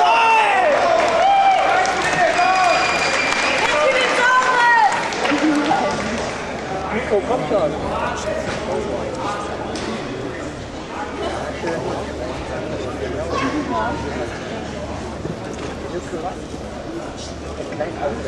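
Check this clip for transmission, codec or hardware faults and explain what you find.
Checking this clip turns up no faults to explain.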